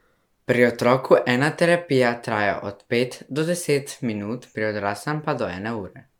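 From start to finish the speech carries a swirly, smeared and hollow quality, and consonant attacks sound blurred rather than crisp. This is generation loss: the artefacts point to an MP3 chain at roughly 140 kbit/s, likely repeated around five times, with each re-encode quantising on a shifted frame grid so noise and spectral holes accumulate. Content stops near 19.9 kHz, yet the smearing is worse than that bitrate alone would give.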